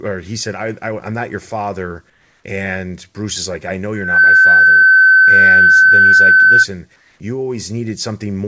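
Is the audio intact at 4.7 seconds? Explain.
No, a loudspeaker feedback squeal runs from 3.93 to 6.66 s, right after "is like I know". The microphone re-amplifies its own loudspeaker output, so a 1.5 kHz tone swells within about a third of a second to roughly 15 dB above the speech.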